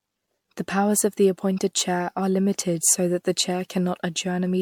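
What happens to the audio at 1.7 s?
At 1.7 s, as throughout, generation loss: the speech sounds swirly, hollow and smeared, likely from about seven MP3 re-encodes near 96 kbit/s, each on a shifted frame grid.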